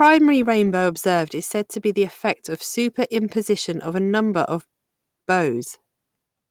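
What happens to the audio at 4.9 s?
Nothing goes wrong at 4.9 s: the speech carries on intact there, with only the light softening expected of Opus voice compression running normally at around 24 kbps.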